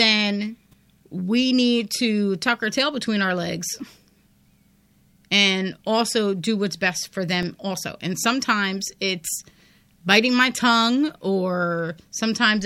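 At 0.72 s, just before "we need to tuck", a corrupt frame was decoded: flipped bits in a single compressed frame were played anyway, producing a faint, brief burst of misplaced energy. The output twice received blocks of digital silence, likely from buffers not filled in time, heard as ticks. The first comes at 7.43 s after "do what's best for" and lasts 1.45 ms, which fits a 64-sample block. The second comes at 11.10 s after "biting my tongue" and lasts 2.9 ms, which fits a 128-sample block.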